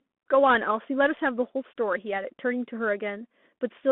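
The speech passes through a Bluetooth CVSD headset codec for its whole length. CVSD codes each sample as a single up-or-down bit with an adapting step size, which fits a 64 kbps stream, and the line here passes only about 200 Hz to 3.5 kHz. The result is thin, boxy speech with no low body or high air, a grainy hiss beneath it, and plainly audible distortion where loud, bright sounds outrun the step size, leaving s sounds scratchy.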